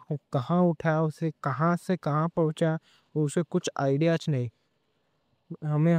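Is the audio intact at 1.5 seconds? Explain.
Yes, at 1.5 seconds the speech plays through cleanly with no dropout, click, distortion or other technical fault.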